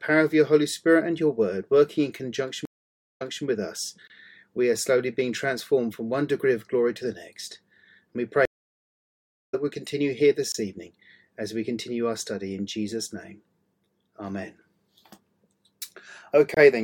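At 2.65 s the audio drops out in a stream reconnect, lasting until 3.44 s. The connection broke and the player went quiet for 523 ms. A fresh decoder then picked up mid-stream. The server resent a burst, so playback resumes 261 ms earlier than where it stopped. A short stretch is heard twice. The restart is soft, with the first moment muted or fading in.

At 4.08 s comes the first gap between chunks, running to 4.10 s. The audio arrives in 6 s pieces, and a 23 ms hole of silence sits at each join. Nothing is lost. The flow is simply interrupted. A length like this points to codec padding or a late chunk start. The same hole returns every 6 s.

At 8.45 s a second stream reconnect begins, ending at 9.55 s. This silence is longer, 1049 ms. This time the stream comes back about 0.7 s later than where it broke, so a piece of the audio is skipped outright. The resumption again starts gently rather than at full level.

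The chunk gap recurs at 10.52 to 10.54 s and at 16.54 to 16.57 s. Each is the same brief 23 ms dropout, spaced 6 s apart.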